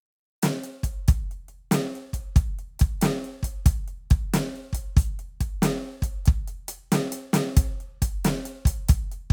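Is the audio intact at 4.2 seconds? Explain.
Yes, the music plays through 4.2 seconds intact, with no fault at that moment.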